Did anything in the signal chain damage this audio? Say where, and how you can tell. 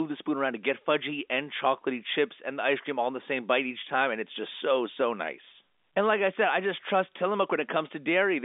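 No, nothing in the chain damaged this audio.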